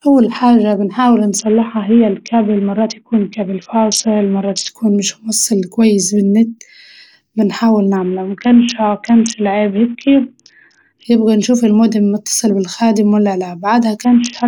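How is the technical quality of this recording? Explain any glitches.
The recording is degraded by three Bluetooth SBC bit pool drops. The first runs from 1.38 to 4.69 s, after "أول حاجة بنحاول" and before "يكون مش موصل كويس". The second runs from 7.96 to 11.05 s, ending just before "يبقى نشوف المودم متصل". The third starts at 14.04 s and lasts to the end. In each, the link starved the encoder of bits. High bands were dropped and the rest quantised coarsely. Speech turns dull and gritty, which fits a fall to roughly 54 kbps.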